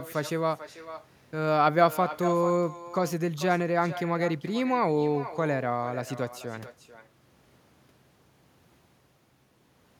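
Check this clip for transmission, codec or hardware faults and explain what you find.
There is one fault, echo with no canceller, running through the whole clip. The far end plays the call on a loudspeaker that its microphone picks up, and nothing removes it, so the speech returns roughly 0.4 s later, about 14 dB quieter, as a thin shadow.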